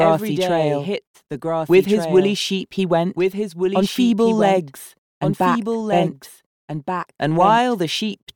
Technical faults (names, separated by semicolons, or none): doubled audio track